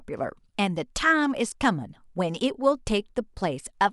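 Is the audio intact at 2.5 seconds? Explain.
Yes, the speech at 2.5 seconds plays through intact, with no dropout, click, distortion or other fault at that moment.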